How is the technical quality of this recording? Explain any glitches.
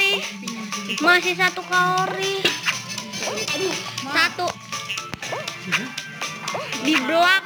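The recording suffers from crude rate conversion across its whole length. The sample rate was raised without any filtering by simply repeating the nearest existing sample, and the pattern of repeats fits a conversion from 44.1 kHz to 48 kHz. Because those repeats fall in a fixed cycle set by the two rates, they add shifted, inharmonic copies of the sound, sitting only about 20 dB below it. This is heard as a gritty, inharmonic fizz riding on louder and brighter passages.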